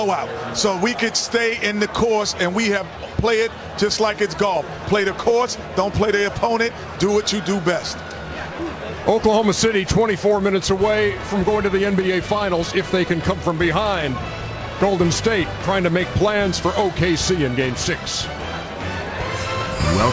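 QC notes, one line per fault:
Throughout: resampler restarted on every block. Each 10 ms block is converted in isolation, so edge errors form a 100 Hz buzz present only under signal.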